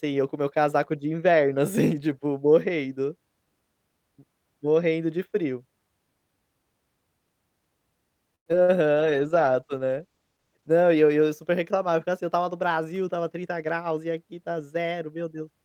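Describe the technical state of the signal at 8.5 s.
From 8.35 to 8.48 s the sound stalls in what is likely a call audio freeze: the last sound is stretched into a fading buzz that drops to silence for about 90 ms. The audio then resumes where it stopped, about 108 ms late, so nothing is lost, only delayed.

Right after, from 8.52 to 8.55 s, a short concealed packet loss leaves a brief smear. Unlike the freeze, this one drops about 20 ms of real audio, patched over by a few milliseconds of continued sound, with no added delay.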